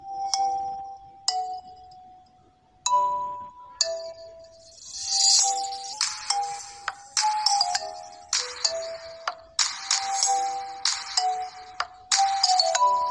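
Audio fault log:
5.93–8.35 s, wrong sample rate: samples play back too fast with no conversion, so the sound runs 1.09 times faster and about 1.5 semitones higher, consistent with 22 kHz material played at 24 kHz.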